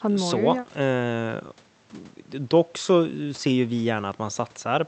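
No faults detected in the speech; it carries the ordinary coding texture of a call codec, with the top of the spectrum rolling off around 8 kHz as the band limit of an Opus call path would produce.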